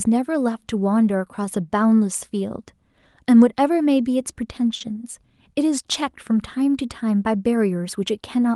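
A speech recording that went through a call codec, with the top end rolling off around 12 kHz, which fits Opus at about 32 kbps. At 4.75 to 4.82 s there's a short stall from a late packet: the jitter buffer ran dry, so the receiver stretched the last sound by about 50 ms, then picked up exactly where it left off. Nothing's lost, but that moment drags, held too long with a faint buzz or dip.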